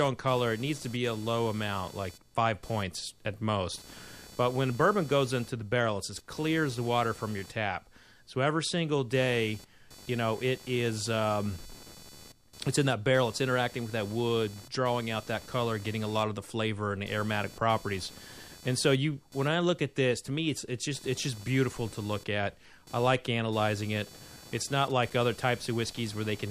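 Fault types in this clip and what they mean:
Computer activity noise: a buzz of pulses near 500 per second, roughly 20 dB under the speech throughout, from processor load shifting the shared audio ground.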